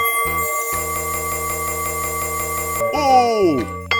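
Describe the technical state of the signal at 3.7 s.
At 3.7 s the signal is intact, with no audible technical fault at that moment.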